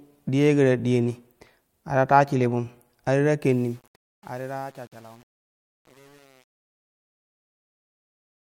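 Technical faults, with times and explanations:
3.44–8.41 s, truncation distortion on a fade: as the speech fades out, which starts at around three and a half seconds, the tail turns gritty and rough, and from 3.76 s to the end it is at its worst. The fade stage is rounding each sample to a coarse grid with no dither, which fits an 8-bit stage. As the level sinks toward the smallest step, the waveform collapses into a few square steps that sound harsh.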